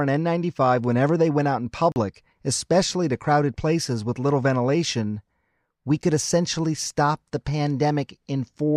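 At 1.92 to 1.96 s, a block of digital silence cuts the speech for 40 ms, heard as a short hole. At 6.02 s, a 10 ms block registers as a tick or dip. Both stop and restart without a fade. An output buffer left unfilled, or invalid calculated values, produces this.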